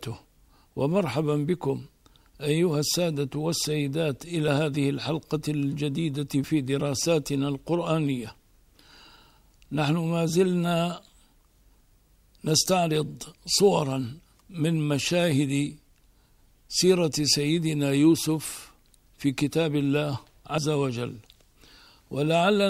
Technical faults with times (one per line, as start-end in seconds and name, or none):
4.48 dropped buffer (overrun)
6.44 dropped buffer (overrun)
20.58 dropped buffer (overrun)